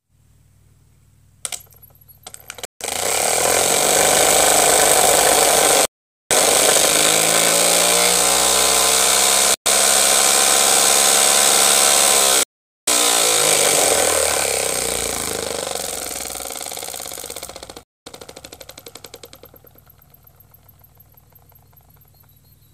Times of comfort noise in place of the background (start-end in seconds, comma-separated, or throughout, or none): none